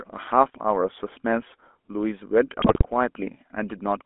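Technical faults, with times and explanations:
Throughout, GSM full-rate codec: the pulse-driven vocal-tract model makes speech buzzy and gravelly; the spectrogram shows energy only from 250 Hz to 3.5 kHz, with coarse harmonics.
2.58–2.86 s, GSM bit errors: corrupted filter, pitch and gain values cause squawks and gargling; the waveform shows sudden level bursts, and the spectrogram shows smeared, displaced bands.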